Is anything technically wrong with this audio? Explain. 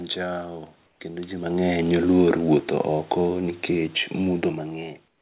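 Yes. From 0.86 to 1.0 s, just before "kendo jii", the room background turns into a flat, featureless hiss about 4 dB quieter. Comfort noise in place of the background is the likely cause: the sender paused during silence and the receiver filled the gap with synthetic noise. The same thing happens from 5.08 s to the end, this time about 8 dB quieter.

Between 2.06 and 4.2 s, the level sinks by about 4 dB, and the voice and room noise drop together. This is automatic gain falling: the gain control judged the input too loud, or its background noise too strong, and gradually turned it down.

Nothing is heard above 4 kHz, which fits the call path's G.711 mu-law coding at 64 kbps.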